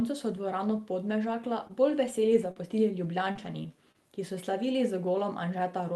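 From about 1.27 s, right after "so dvorano", to 3.96 s, just before "ki so", there are scattered short gaps: around five small dropouts, none longer than about 40 ms, each patched by stretching the previous sound, so you hear brief ticks and little smeared hiccups.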